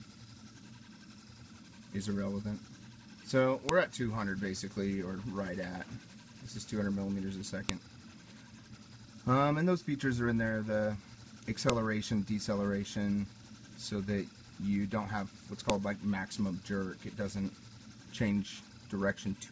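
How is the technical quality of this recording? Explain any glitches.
Sharp, loud clicks break into the sound at 3.69, 7.69, 11.70 and 15.70 seconds, exactly 4 s apart. This is a file header played as audio: separate 4-second WAV pieces were joined or streamed with their headers left in, so those header bytes play back as samples, snapping regardless of the surrounding signal.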